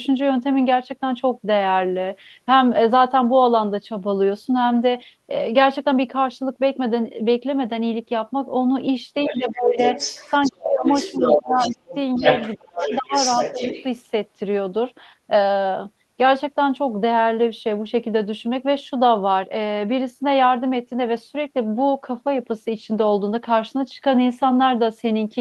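From 9.25 s a second, fainter voice slips in under the speech, about 10 dB down, until 9.43 s. It returns louder, about 5 dB below the speech, from 9.78 to 10.52 s and again from 10.84 to 13.84 s. This is the other side's voice leaking through. The far end was likely playing on the talker's loudspeaker, and the echo canceller did not remove all of it from the microphone.

Alongside that leakage, the talker's own speech sags and breaks up. It dips by roughly 15 dB from 9.29 to 9.78 s and drops hard, by around 35 dB, in patches between 10.48 and 12.24 s. It falls about 30 dB between 12.57 and 13.12 s and only slightly from 13.53 to 13.72 s. This is speech suppressed in double talk. With both sides talking at once, the canceller likely could not tell the talker from the echo and turned both down.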